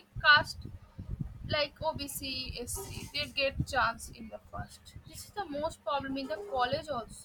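From 2.46 s to 4.57 s the speech drops by about a semitone (108 cents) and slows by about 6%, then snaps back to normal. This is a drift correction step, likely from clock-matching software lowering the playback rate in one move to refill its buffer. Unlike tape wow, the change is abrupt and holds steady rather than wavering, and because speed and pitch shift together, it is not a pitch shifter acting alone.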